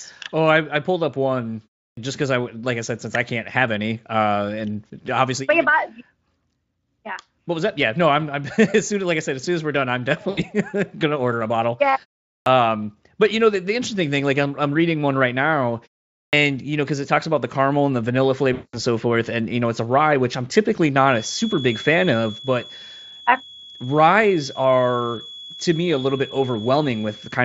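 Clipped start after a pause at 1.92 s: after a silence of about 0.32 s, the output device seems to have dozed off and needed time to wake, so roughly 52 ms of the returning speech is swallowed and the word bursts in without its opening sounds. The same clipped start recurs at 12.41 s, losing about 52 ms after a 0.44 s pause, and at 16.27 s, losing about 59 ms after a 0.48 s pause.

VoIP packet loss concealed by the speech codec at 10.29 s: about 80 ms of audio went missing, which fits four 20 ms frames. The decoder filled the hole by extending its last pitch and spectral shape at falling gain, so the sound smears into a brief buzzy tone or coloured noise that fades before speech resumes. A longer gap follows at 18.53 s, where about 200 ms, consistent with ten frames, is concealed the same way. The synthetic sound is stretched over a longer stretch and decays further.

Feedback whistle from 20.97 s to the end: a thin tone at 3.4 kHz sits well below the speech and slowly swells and fades in level. 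This is likely a loudspeaker-to-microphone loop hovering just short of runaway feedback, ringing on one frequency.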